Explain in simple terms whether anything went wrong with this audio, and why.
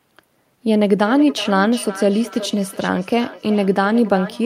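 From about 1.02 s to the end, the speech has a feedback echo between two devices. A second device in the room is playing the call back into the microphone, so each word returns roughly every 0.4 seconds, thinner and more ringing.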